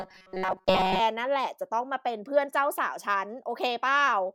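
From 0.01 s to 1.00 s the speech takes on robotic sound from repeated short buffers, heard as a rigid metallic buzz at about 188 Hz that still loosely tracks the speech. The likely cause is audio arriving too seldom, so playback fills the gaps by looping a very short stretch, which fits a buffer of roughly 5.3 ms, while the real audio for those moments is dropped. Most of the interval is covered by these repeats.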